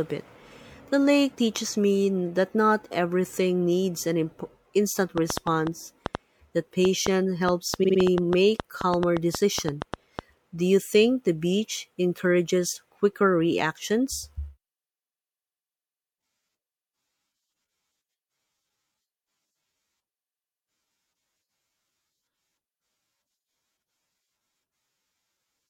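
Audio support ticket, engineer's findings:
Train of clicks, 5.18 to 10.20 s: irregular ticking at about 5 per second, some 30 in all, peaks about 15 dB above the audio, present in pauses too. Likely external interference or a struggling interface.

Repeated frames, 7.83 to 7.98 s: one 52.2 ms block plays three extra times, a stutter that adds 156.7 ms. Repeated frames sent or written upstream of the decoder. Unlike the clicks, the sound itself loops.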